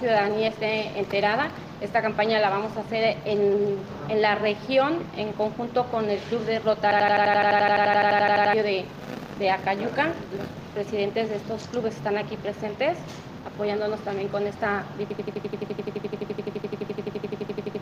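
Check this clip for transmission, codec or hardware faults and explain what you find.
There are two system hang loops, from 6.91 to 8.53 s and from 15.10 s to the end. The system froze while the hardware kept replaying one 85 ms piece, which fits a 4096-sample buffer. It repeats at 11.7 Hz as a machine-gun stutter, and about 1.5 s and then 3 s of audio are lost.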